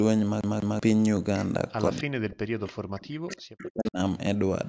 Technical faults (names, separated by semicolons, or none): echo leak; speech suppressed in double talk